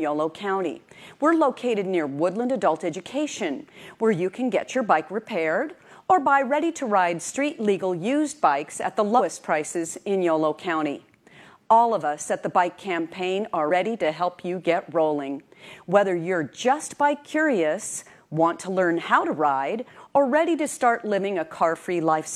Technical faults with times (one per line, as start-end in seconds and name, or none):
9.15-9.21 compressed frames skipped
13.66-13.71 compressed frames skipped